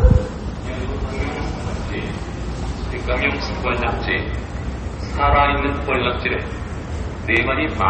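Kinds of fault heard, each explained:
MP3 compression: Throughout the clip, nothing is heard above 8.3 kHz, and plainly audible coding damage points to a starved bitrate of roughly 32 kbps, likely from MP3. Short of bits, the encoder discards the treble and drops weaker frequency detail frame by frame.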